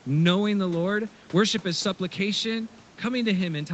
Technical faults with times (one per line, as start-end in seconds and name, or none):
none